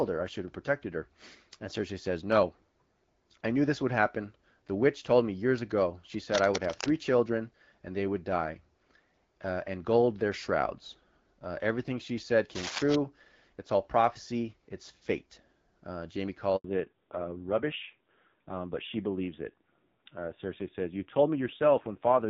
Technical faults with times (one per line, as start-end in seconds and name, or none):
6.32-6.89 cable scratch noise
12.55-12.95 cable scratch noise
16.56-16.64 handover gap
16.64-22.30 fallback to narrowband